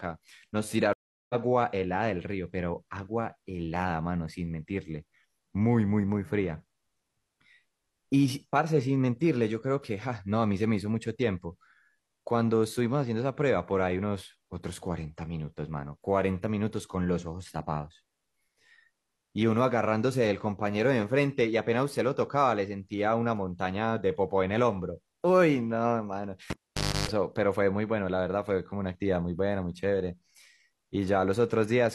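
Right at the start, from 0.93 to 1.35 s, there's a stream reconnect. The connection drops, you get about 362 ms of silence, then a fresh decoder picks the speech up roughly 0.4 s further on, so a small chunk is simply skipped.

Near the end, 26.50 to 27.09 s, the cable is pulled and plugged back in. There's a pop, about 0.53 s unplugged, a 295 ms burst of 50 Hz mains buzz while only the tip makes contact, then another pop as the sound returns.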